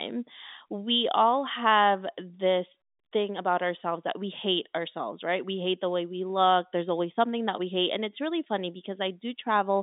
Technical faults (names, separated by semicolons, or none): none